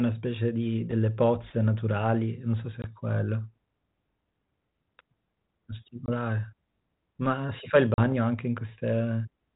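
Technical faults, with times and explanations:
2.82 to 2.85 s, 6.06 to 6.12 s and 7.94 to 8.06 s, packet loss on an ADPCM call: the speech drops into abrupt, hard-edged silence of about 20, 20 and 40 ms, the longest fitting roughly two lost packets. Because this 32 kbit/s G.726 stream, limited below 4 kHz, codes only differences from a running prediction, the decoder's predictor and step size lose sync with the sender's. Sound returns slightly distorted, settling within tens of milliseconds.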